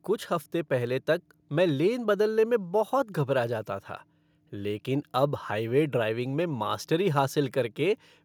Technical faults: none

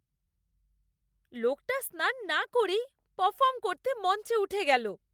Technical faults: none

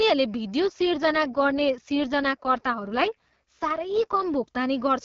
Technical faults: AMR rate drop

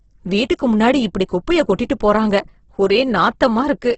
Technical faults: Opus compression

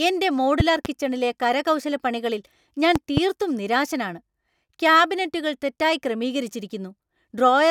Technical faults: loud pop

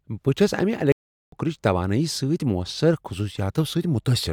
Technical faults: playback stall

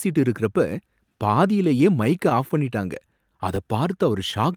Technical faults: clock drift between sender and receiver; repeated timing corrections; scattered short gaps

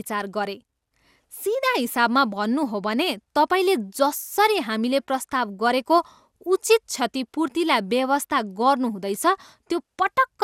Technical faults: generation loss

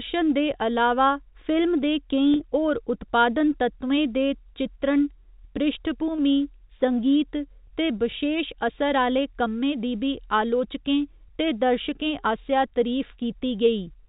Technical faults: packet loss with pitch repetition

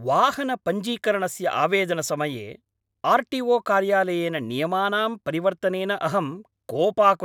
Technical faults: none

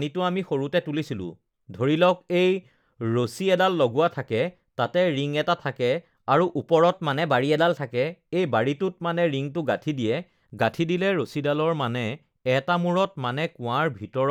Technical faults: drift correction step

